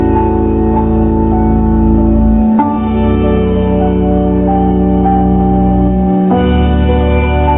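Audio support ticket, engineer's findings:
Listened through in full and nothing stood out as needing attention.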